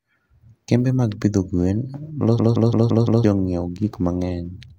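From 2.39 s to 3.24 s a system hang loop hits: the system froze while the hardware replayed one 171 ms slice, fitting an 8192-sample buffer, five times at 5.86 Hz. This machine-gun stutter loses about a second of audio, and the waveform shows identical repeated blocks.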